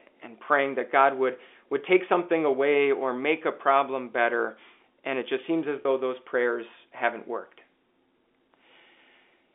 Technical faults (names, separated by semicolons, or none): packet loss with pitch repetition